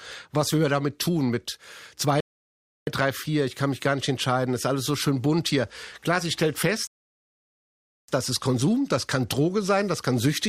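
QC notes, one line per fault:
2.20–2.87 s and 6.87–8.08 s, rebuffering stall: the player exhausted its downloaded audio and halted until more data arrived, so the speech drops to silence for 0.67 s and then 1.21 s, then picks up exactly where it stopped. Nothing is skipped, but time is added.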